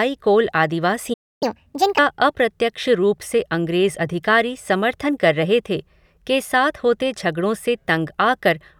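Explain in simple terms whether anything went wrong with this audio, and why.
Two things went wrong, back to back. At 1.13 s the speech cuts out for about 0.28 s, a playback stall, most likely because the player briefly ran short of data. From 1.43 to 1.98 s it plays the backlog at 1.5 times normal speed to catch up, so the pitch jumps roughly seven semitones before settling back.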